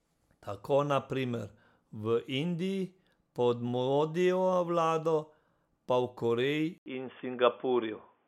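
At 6.78 s, after an 80 ms silence, the speech turns dull and boxy with nothing above 3.5 kHz, a level shift of about 5 dB, and faint new background noise, likely an input switched to a poorer device.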